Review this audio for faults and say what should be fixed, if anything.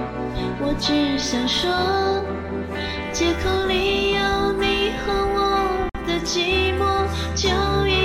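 A 52 ms gap cuts the sound from 5.89 to 5.95 s: a gap at a join of encoded pieces, with encoder delay and padding left untrimmed. Trim each piece's encoder delay and final-frame padding before joining, or encode the sound in a single pass.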